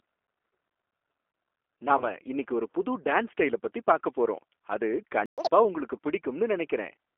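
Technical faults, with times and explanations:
Throughout, G.729 codec: the speech has been squeezed through an 8 kbit/s G.729A voice codec, which throws away the actual waveform and rebuilds each 10 ms frame from a vocal tract filter, a pitch predictor and a handful of pulses. The result is telephone-band audio, roughly 300 Hz to 3.4 kHz, with nothing bright above that, and the codec damage is plainly audible as a rough, slightly synthetic quality.
1.98 to 2.04 s, VoIP packet loss concealed by the speech codec: about 20 ms of audio, two codec frames' worth, never arrived, so the decoder filled the gap by repeating its last pitch and filter settings at falling gain. That smears the sound into a brief fading buzzy tone or coloured noise rather than a clean dropout, and because each frame is predicted from the previous one, the speech sounds weak or distorted for a short while after real data resumes.
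5.26 to 5.38 s, playback stall: the audio stops dead in mid-flow for 120 ms and then carries on. The gap is true silence, not a fade or a smeared tone, which points to the player running out of buffered data or its audio thread being blocked, rather than to the codec itself.
5.38 to 5.50 s, catch-up at higher speed: immediately after the stall the player runs its backlog through at double speed for about 120 ms to win back the lost time. Because it does this by resampling rather than time-stretching, pitch rises along with tempo, by roughly 10 semitones, giving a short chipmunk-like squeak before playback drops back to normal speed and pitch.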